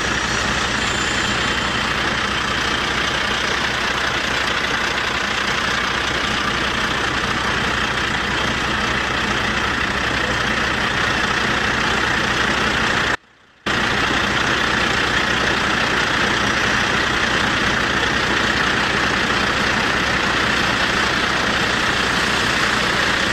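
At 13.16 s the signal path likely lost its wanted input for a moment while the chain after the break stayed live, giving an audio dropout to a faint residue that lasts until 13.66 s. The sound cuts off abruptly for about half a second. Instead of silence, the gap holds only a faint leak of the sound, roughly 30 dB below its normal level. It then snaps back without any fade, so the hole sounds like a break rather than a pause.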